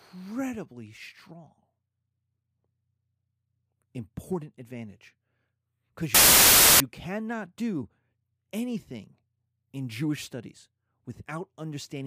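At 6.15 s the speech breaks into a sudden burst of loud static. It lasts until 6.80 s, just before "you cannot do". This is file tags played as audio. An embedded cover picture, stored as compressed data, was read out as if it were samples. Compressed bytes look random, so they play as very loud white noise. The burst starts and stops abruptly, with hard edges.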